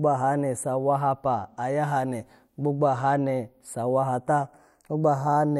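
Channels drifting apart runs throughout this speech recording, from start to finish. The left and right channels appear to come from two devices on independent clocks, one running roughly 50 parts per million off the other, so the delay between them creeps steadily and reaches a fraction of a millisecond by the end. When the channels are combined to mono, the resulting comb-filter notches glide slowly across the spectrum, giving the speech a gradual flanging sweep.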